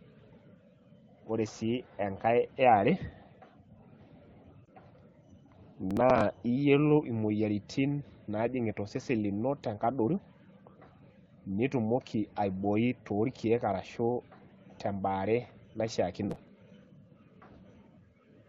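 At 4.65 to 4.69 s the speech briefly dips and warbles, then comes back weak or rough for a moment. This is a lost AMR speech frame. A single 20 ms frame failed its error check, and the AMR wideband (HD Voice) decoder filled the gap by extending the previous frame's pitch and vocal-tract shape at reduced gain. One frame is too short for the sound to stretch out or fade, so all that remains is a small smeared wobble in the wideband speech.

From 5.91 to 6.21 s, and again from 16.24 to 16.48 s, a gritty burst of crackle tears across the speech, then clears. This is processor overload crackle. The processor fell behind and missed a run of small buffer deadlines. The missed buffers were skipped rather than repeated, so each one leaves a tiny hard-edged hole. The spacing of the ticks fits buffers of around 5 ms, with roughly fifteen missed in each burst, and together they fuse into the tearing texture you hear.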